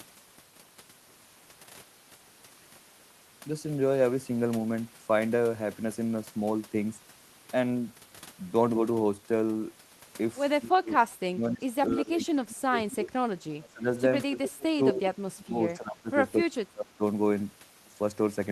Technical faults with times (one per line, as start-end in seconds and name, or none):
10.61-10.93 speech suppressed in double talk
11.19-13.12 speech suppressed in double talk
13.40-13.88 speech suppressed in double talk
14.26-16.12 speech suppressed in double talk
16.41-17.02 speech suppressed in double talk